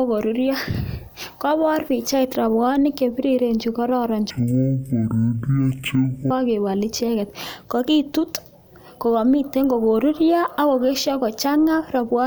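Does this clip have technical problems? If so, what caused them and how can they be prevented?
Yes. From 4.31 to 6.31 s, between "pichait robwonik chebiriren chekororon" and "icheket kokitut", the speech drops to half speed and an octave lower, with a faint mirrored copy in the upper spectrum. This is stereo read as mono: interleaved left and right samples were played back one after another as a single channel. Prevent it by reading the channel count from the stream header and de-interleaving before playback.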